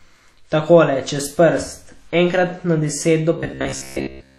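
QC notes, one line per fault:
throughout: WMA compression. The speech carries plainly audible codec damage: a ringing, washy quality with hiss that rises and falls with the signal, and nothing above 15.6 kHz. This is likely a transform codec with long blocks, whose quantisation noise smears across tens of milliseconds around each sound while weak spectral lines are dropped to zero. The damage and the missing top end fit a low bitrate near 48 kbps.
3.38 to 4.38 s: robotic sound from repeated short buffers. To the end of the clip the speech becomes a rigid, metallic buzz at 66.7 Hz that tracks the original only loosely, with roughly 70 percent of the audio made of repeats. The likely cause is audio arriving too seldom, so the playback fills each gap by replaying the last 15 ms while fresh material is skipped. The repetition imposes a fixed buzz at one over that length.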